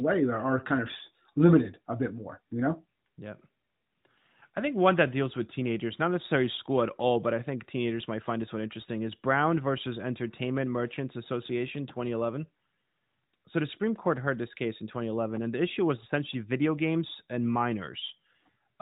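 The speech clip has no technical fault. It carries the narrowband sound of the AMR narrowband mobile codec, with nothing above 4 kHz and only light coding character, which fits AMR-NB running at its 12.2 kbps mode.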